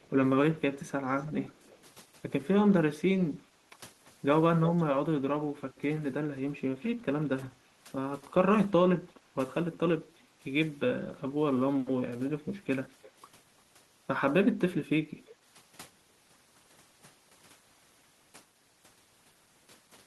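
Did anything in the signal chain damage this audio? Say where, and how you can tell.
Yes, at the call-processing stage. There is an echo leak at 0.0–1.82 s, 7.41–10.22 s, 12.27–13.11 s and a brief scrap at 15.26–15.35 s. A faint, delayed copy of the speech trails the original by about 340 ms (337–345 ms), sitting roughly 25 to 30 dB down. It is likely a far-end loudspeaker whose echo canceller let some of its microphone pickup return. Room reverberation would decay smoothly from the direct sound. This is a discrete repeat at a fixed delay.

The second fault, background gated by the echo canceller, falls at 3.4–3.57 s. The room sound dips by about 11 dB for roughly 150 ms, then comes back. The canceller clamped the microphone down while the loudspeaker was active and released it afterward. A network dropout would cut everything to silence, often with a click at the edges. Here only the background is pulled down, and then it returns.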